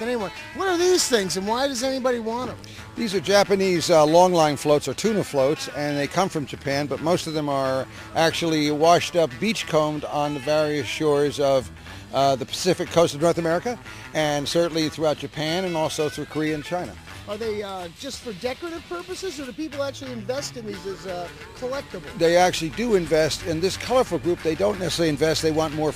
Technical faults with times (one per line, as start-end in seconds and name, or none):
none